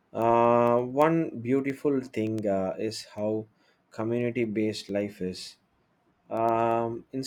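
From about 0.1 s right through to 7.17 s there's a steady run of word clock ticks, roughly one every tenth of a second, so around seventy in all. The receiving end is clearly running on its own clock rather than locking to the sender, and every time the two drift past each other a single sample gets dropped or doubled. That rate suggests the clocks are something like 200 ppm apart, and each slip lands as a sharp tick in the speech.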